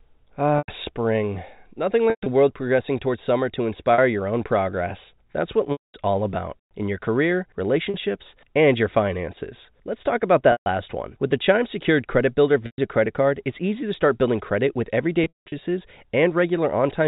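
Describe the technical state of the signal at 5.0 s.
At 5.0 s the speech is intact, with no fault present, only the expected telephone-band character of G.711 coding, which holds nothing above 4 kHz.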